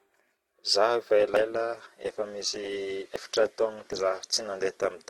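Speech that switches abruptly to an adaptive stream at a lower bitrate from 1.17 s to the end. Codec artefacts rise, consistent with a drop from around 64 to 12 kbit/s. Unlike a dropout, there is no gap. Forward jumps at 1.37, 2.48, 3.16 and 3.93 s are likely dropped buffers (overrun). Roughly a tenth of a second is skipped each time, a little more at the first. Unlike a dropout, no silence is inserted.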